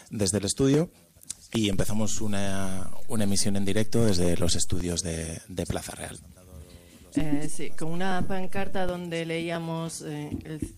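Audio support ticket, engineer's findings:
DC step, 1.73 s: low thump as the waveform's zero line jumps by about -22 dBFS, holds until 4.81 s. Sound carries on untouched underneath. Probably a converter recalibrating or an offset input getting switched in.

DC step again, 7.20 s to 8.89 s: same thump, offset about -21 dBFS. Same likely component, so worth checking the ADC's calibration behaviour and any input switching around those moments.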